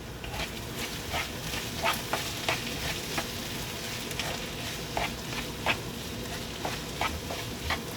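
At 1.95 s, compressed frames skipped: a couple of 20 ms frames were missing or rejected by the decoder as damaged, so roughly 40 ms of audio never plays. The sound jumps ahead by that amount.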